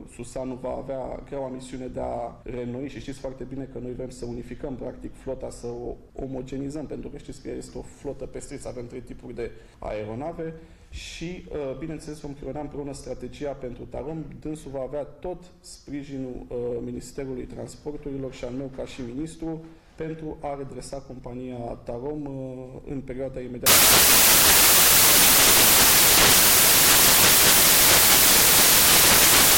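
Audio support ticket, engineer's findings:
Loud, harsh broadband noise from 23.66 s to the end of the clip. Samples built from the wrong bytes: decoder/reader misassembling each sample, with bytes swapped, offset by one, or misaligned. The fast-changing low bits are promoted to the top of each value, so the waveform becomes broadband noise.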